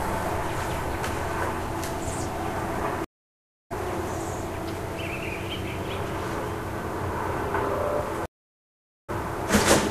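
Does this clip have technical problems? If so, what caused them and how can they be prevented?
Yes, there are two stream reconnects. At 3.04 s and again at 8.26 s the network connection dropped, so the player stopped, reconnected and started a fresh decoder partway through the stream. Each time the sound cuts to silence, for 0.66 s (until 3.72 s) and then 0.83 s (until 9.10 s). It resumes further along, roughly half a second later the first time and about a tenth of a second later the second time, so a short stretch is skipped. A larger client buffer with resume-from-offset reconnection would prevent this.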